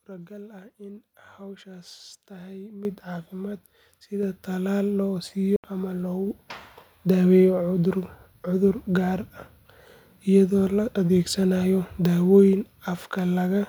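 Microphone volume stepped up at 2.85 s, 4.23 s and 6.27 s in this speech recording: the call software judged the input too quiet and raised the device gain in single jumps of about 10, 5 and 2 dB, so voice and background noise get louder together. A Bluetooth dropout at 5.56–5.64 s leaves a silent gap of about 75 ms before the speech carries on as if it had kept playing, most likely packets arriving too late for the headphones, which fits roughly four lost packets.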